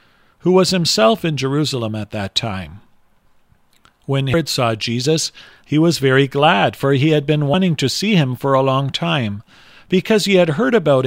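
Whole compressed frames are skipped twice, so the speech jumps forward instead of playing continuously. At 4.34 s roughly a fifth of a second of speech goes missing, consistent with about seven 32 ms frames being dropped. At 7.54 s about a tenth of a second vanishes, which points to around three frames.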